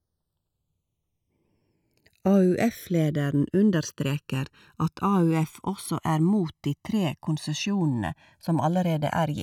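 Channels drifting apart throughout: separate clocks, about 100 ppm off, slide the inter-channel delay to roughly 1.5 ms, so mono-summed speech sweeps into slow flanging.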